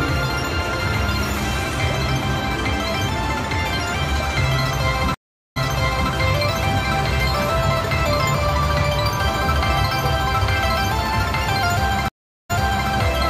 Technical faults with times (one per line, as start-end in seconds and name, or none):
5.14-6.12 stream reconnect
12.08-12.89 stream reconnect